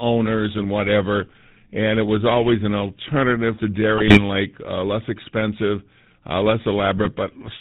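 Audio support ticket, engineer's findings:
Buzzy, gravelly roughness on the speech throughout, nothing above 4 kHz, plainly audible. Cause: GSM full-rate codec, consistent with 13 kbps GSM full rate. Vocal-tract model driven by regular pulses, excitation decimated to every third sample.

Squawk and gargle, 3.94 to 4.22 s, right after "always an alternative to". Cause: GSM bit errors from a weak link. Corrupted filter, pitch and gain values in the decoder distort the spectrum and level per frame.

Shorter pop and gargle, 6.97 to 7.10 s, after "uh less expensive uh". Same cause: GSM bit errors corrupting decoder parameters over a few frames.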